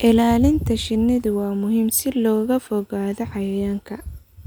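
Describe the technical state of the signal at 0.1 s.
Nothing at 0.1 s points to a fault: the audio is intact there, with no dropout, click, distortion or other artefact.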